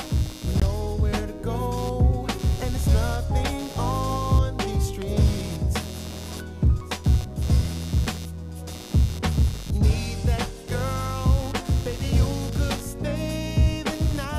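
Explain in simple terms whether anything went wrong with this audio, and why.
Computer activity noise runs through the whole clip: a buzz pulsing about a hundred times a second, quieter than the main sound, caused by the computer's shifting electrical load. At 0.60 s the audio drops out for 19 ms and resumes, likely a Bluetooth stall where the headphones briefly ran out of data.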